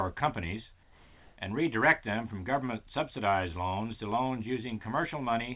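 From 0.83 to 1.37 s, about 540 ms, the background becomes a steady, featureless hiss, roughly 28 dB below the loudest parts and about 1 dB off the surrounding level. This is likely comfort noise in place of the background, inserted during a discontinuous-transmission pause over a narrowband call path cut off above 4 kHz.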